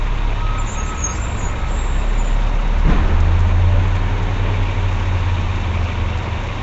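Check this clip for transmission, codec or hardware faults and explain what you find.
One codec fault runs through the whole clip: Nellymoser compression, likely from a Flash-era Asao encoder. The damage is plainly audible. The audio has a rough, hissy halo and a smeared, underwater character, and nothing survives above 7.8 kHz, which fits a stream of about 32 kbps. Weak bands are given no bits and refilled with noise. A spectrogram would show a hard ceiling at 7.8 kHz and grainy, blocky noise patches in place of clean harmonic detail.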